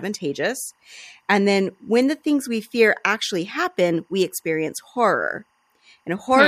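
A faint chirping warble near 1 and 2 kHz sits under all the speech: timecode bleed, 23.976 fps code leaking in from a nearby track.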